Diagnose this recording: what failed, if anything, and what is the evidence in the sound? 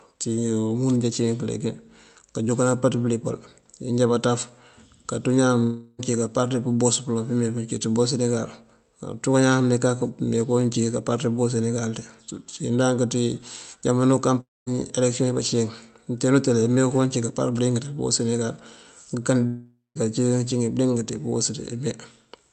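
At 5.63–6.01 s, 14.41–14.68 s and 19.46–19.97 s the speech smears into a fading buzz lasting roughly 0.26 to 0.49 s, then resumes with the gap's content missing: a long network dropout, likely packets lost upstream while the jitter buffer concealed the hole.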